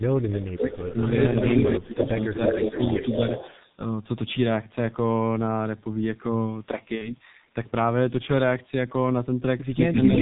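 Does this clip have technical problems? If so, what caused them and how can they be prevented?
Yes. The whole clip runs through the G.723.1 codec at about 6.3 kbit/s, so everything is muffled and hoarse, with no content above 4 kHz and smeared consonants. A wideband codec such as G.722 or Opus would avoid this.

From 0.32 to 0.97 s, 1.67 to 2.06 s and 2.48 to 2.81 s the voice sinks, by up to roughly 20, 25 and 10 dB. That's likely speech suppressed in double talk, where the echo canceller ducked everything while both ends spoke. A better double-talk detector or a headset at the far end would help.

From 1.91 to 3.79 s a delayed copy trails the voice by 345 ms, only a bit quieter. It comes back at 10.04 s, 353 ms late and about as loud as the original. That's likely an echo leak from a loudspeaker the canceller didn't fully cancel. Headsets, lower speaker volume or a properly converged canceller would prevent it.

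Between 6.95 and 7.15 s there's VoIP packet loss concealed by the speech codec. The sound smears into a fading buzzy tone or coloured noise, which fits about 60 ms of lost audio, or two 30 ms frames. The voice then takes a moment to recover. A jitter buffer, FEC or a steadier network path would reduce this.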